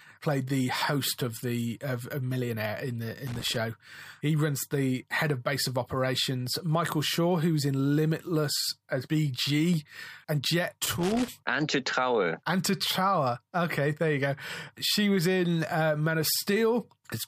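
Loose connector crackle hits the speech from 3.27 to 3.56 s and from 10.84 to 11.28 s. A failing contact chops the signal into irregular scratchy bursts, unlike clean digital dropouts or isolated clicks.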